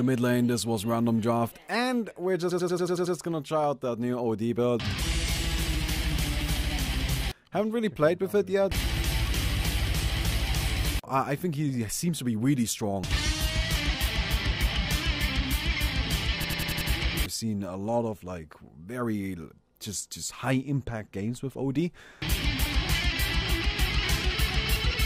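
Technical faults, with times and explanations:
2.51–3.16 s and 16.44–16.90 s, system hang loop: a 93 ms slice stutters at 10.8 Hz, seven then five repeats, as hardware replays a stalled 4096-sample buffer.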